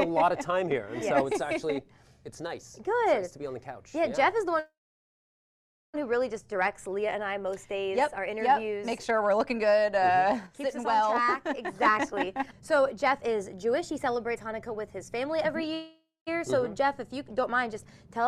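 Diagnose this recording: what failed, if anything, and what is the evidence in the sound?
Network and jitter buffer: call audio freezes at 4.59–5.96 s and 15.74–16.29 s. The last sound is stretched into a fading buzz or hiss, then silence for about 1.2 s and 0.19 s. The audio resumes exactly where it stopped, with nothing lost. This was likely caused by delayed packets starving the buffer. Unlike a dropout, nothing is skipped.

Jitter buffer speed-up from 11.15 to 15.69 s: the audio runs about 7% fast and sounds hurried, but its pitch stays the same. Repeated removal of short pitch-period pieces trims roughly 0.3 s of excess delay. A resampling or clock error would shift pitch too.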